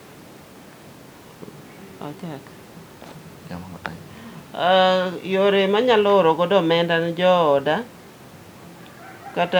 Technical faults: none

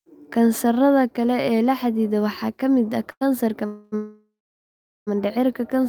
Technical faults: short stall from a late packet; call audio freeze

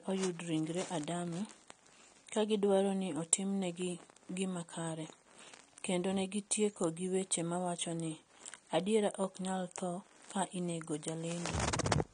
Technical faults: AAC compression

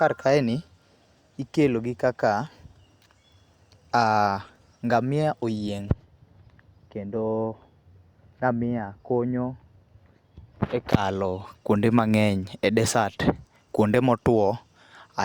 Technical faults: none

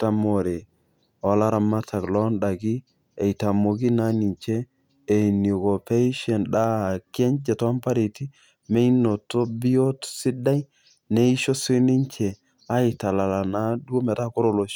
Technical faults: none

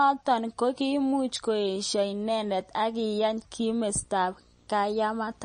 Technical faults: MP3 compression; video or display buzz

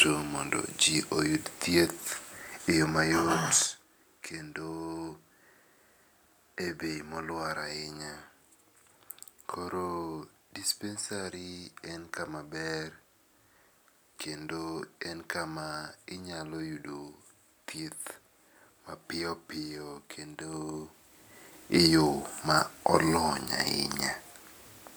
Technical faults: zipper noise

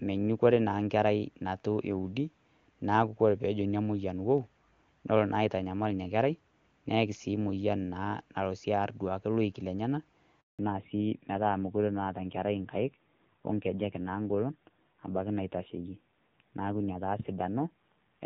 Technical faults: handover gap; fallback to narrowband

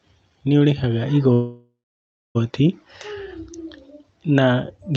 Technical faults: call audio freeze

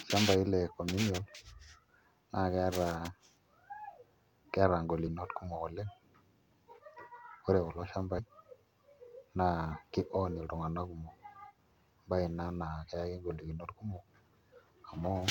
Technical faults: compressed frames skipped

